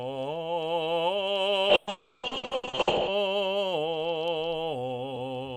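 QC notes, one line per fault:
1.74–3.19 s, call bitrate drop: the music turns dull and grainy, with a watery, smeared texture and the top end gone above about 8 kHz, then opens back up to full brightness. The encoder's rate was pulled from 128 kbps down to 6 kbps and held at that floor for about 1.38 s, so the codec quantised everything far more coarsely and narrowed its coded bandwidth from 20 kHz to 8 kHz until the rate recovered.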